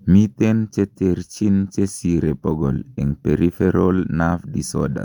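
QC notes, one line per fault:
No faults detected in review.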